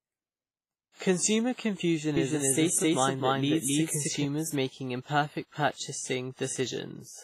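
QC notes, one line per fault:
Throughout: WMA compression, heavy codec damage with nothing above 15.5 kHz, and a ringing, washy smear and hiss that breathes with the speech, which fits a low bitrate around 24 kbps. Likely long transform blocks spreading quantisation noise over tens of milliseconds, unlike steady background hiss.
2.17–4.25 s: doubled audio track, a second full-band copy of the speech at roughly the same level, trailing by about a third of a second. It starts and stops abruptly and has no decay or room colour, unlike an echo or reverb, likely from an edit or second capture path.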